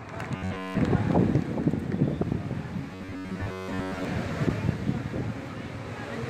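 Two stretches, from 0.36 to 0.80 s and from 2.93 to 4.05 s, turn into a rigid metallic buzz at about 94 Hz, giving robotic sound from repeated short buffers. This is likely caused by the last 10.7 ms being looped while roughly 70% of the real audio is skipped. Unlike codec warble, the buzz stays at a fixed rate.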